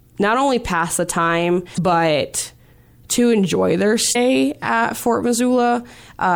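A brief glitch breaks the speech twice, from 1.74 to 1.78 s after "only pass the time" and from 4.12 to 4.16 s after "to enjoy their". Both are damaged data in a compressed stream: corrupted bytes make the decoder misread frames and lose sync.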